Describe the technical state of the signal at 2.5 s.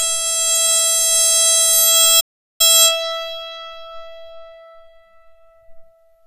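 At 2.5 s the music is silent, inside a playback stall from 2.2 to 2.61 s, about 390 ms long; the player likely ran out of data or was blocked before resuming. On a waveform it is a flat gap, and on a spectrogram a blank vertical band. Around it, the music carries HE-AAC compression throughout, plainly audible, likely at a low bitrate near 20 kbps. The treble is rebuilt from copied lower bands, so it sounds gritty and metallic, with a spectrogram showing a smeared upper region.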